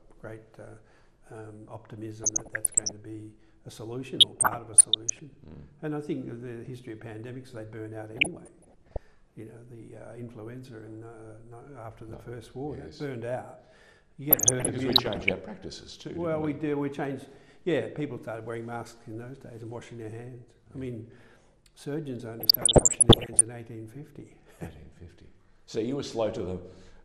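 An MP2 encoder working short of bits, at a rate that fits around 80 kbps, is the likely cause of the plainly audible MP2 compression throughout. Upper sub-bands drop out and flicker and the rest are coarsely quantised, so the sound is dull and gurgling with a granular edge. Weak reception also let bit errors slip past the error correction at 2.23–2.92 s, 4.20–5.19 s, 8.17–8.99 s, 14.31–15.32 s and 22.40–23.41 s. The error rate was under 1% in most bursts and nearer 1.5% in the last. The errors corrupted samples, putting short blips of noise into single sub-bands: DAB burbling over the audio.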